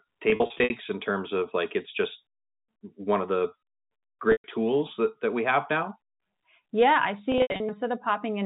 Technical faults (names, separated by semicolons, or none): packet loss with pitch repetition